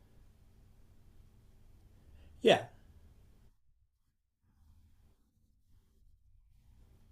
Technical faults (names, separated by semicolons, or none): none